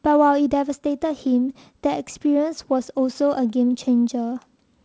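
No technical faults can be heard in this speech.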